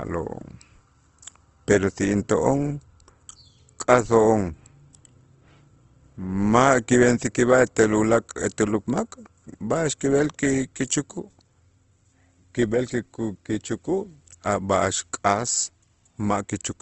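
From start to finish the speech sounds grainy and rough, with a noisy texture over the voiced sounds and nothing at all above about 8.1 kHz, so the top end is dull and closed off. This is likely Opus compression in its CELT music mode: short of bits, the encoder fills bands with folded or noise-like content instead of leaving gaps, and narrows the bandwidth to wideband, which fits a bitrate near 16 kbps.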